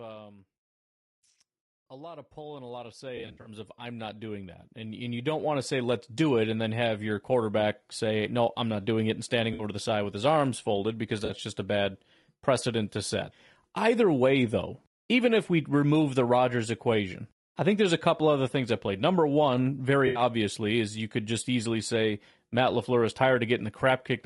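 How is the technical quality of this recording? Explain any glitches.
Technical quality is pretty rough. The speech carries coding damage the whole way through, there's a slow gain swell near the start, and there are four short dropout patches.

Throughout, the speech sounds grainy and rough. There's a noisy fizz between the pitch harmonics, and the top band sounds thin and a bit synthetic. That's most likely low-delay AAC compression, AAC-ELD, the codec typical of video calls. Its short frames can't separate the voice harmonics cleanly, and they eat up bits, so at a rate that fits something like 32 kbps the damage is plainly audible.

From 1.89 to 6.47 s there's automatic gain rising. The level climbs by about 20 dB over those four and a half seconds, and the background noise comes up right along with the voice. That's the AGC deciding the input was too quiet and steadily turning itself up.

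AAC frame loss with concealment shows up four times: at 3.17 to 3.49 s, 9.53 to 9.63 s, 11.25 to 11.31 s, and 20.07 to 20.21 s. The first is the worst. About 160 ms goes missing in bits scattered across roughly 280 ms, and the longest gap is around 70 ms. The others are 60, 40 and 80 ms. Each time, the decoder patches the hole from the last good spectrum, so you hear a brief smeared, noisy, phasey blur rather than silence.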